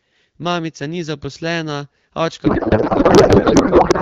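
Speech that is clear at first, with the light coding texture of AMR wideband (HD Voice) that fits a rate around 12.65 kbit/s, collapses at 2.45 s into garbled noise and warble that barely tracks the talker, lasting to the end. This is a codec payload misread: frames packed in AMR's octet-aligned format are being unpacked as bandwidth-efficient, so every field lands in the wrong bit positions and the decoder rebuilds nonsense from valid-looking frames.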